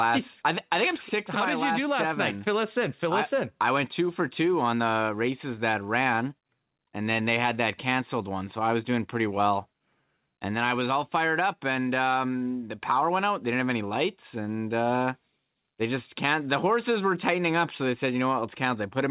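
No technical faults are audible.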